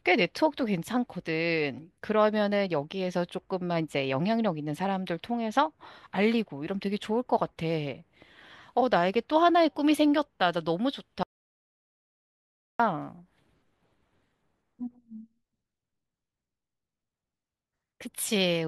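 At 11.23 s the speech drops to total silence until 12.79 s, an audio dropout lasting 1.56 s, likely from lost input, with no room tone, unlike a natural pause.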